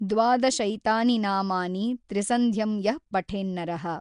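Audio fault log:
throughout, Nellymoser compression: The speech carries a rough, hissy halo and a smeared, underwater quality, with nothing above 10.6 kHz. The likely cause is Nellymoser Asao, the old Flash microphone codec, at a rate that points to about 44 kbps. It codes short fixed blocks at a flat two bits per sample, so weak bands get no bits and are filled with noise, which blurs detail and adds the grainy wash.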